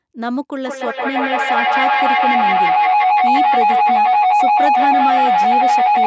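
Speech with feedback howl from 0.66 s to the end at 6.06 s. Two devices in one room share the call. Each trip through microphone and loudspeaker adds level. The howl settles around 700 Hz, repeats through the loop roughly every 150 ms, and peaks about 8 dB above the speech.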